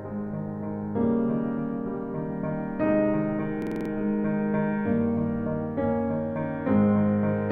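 A music clip with a system hang loop from 3.62 to 3.90 s: a 46.4 ms fragment repeats six times, a rapid 21.5 Hz stutter that fits a 2048-sample buffer replaying while the system stalled.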